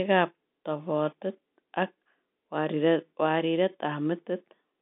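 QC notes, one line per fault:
Nothing here needs flagging: the speech comes through a G.711 telephone line, so it sounds narrow, with the band running from about 200 Hz to 3.6 kHz and nothing above about 3.7 kHz, exactly as a phone call should.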